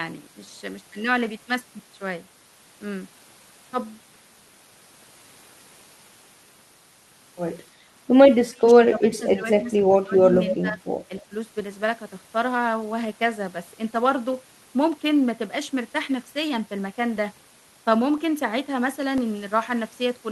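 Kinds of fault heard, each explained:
Speech suppressed in double talk: with both ends talking together, the echo canceller likely failed to tell this talker from its loudspeaker echo and turned both down. The voice dips by up to about 25 dB from 8.46 to 10.35 s, with briefer dips of about 10 dB at 10.61 and 11.3 s.
Echo leak: the far end's echo canceller likely let part of its loudspeaker pickup through, so a copy of the voice came back 268 ms late. It is a short scrap from 10.48 to 10.54 s, about 10 dB below the speech.
Periodic USB or driver dropouts: something likely blocked the USB bus or audio driver every 0.5 s, replacing roughly a millisecond of audio with silence each time. Between 17.17 and 20.18 s this gives a steady run of ticks, about seven in all.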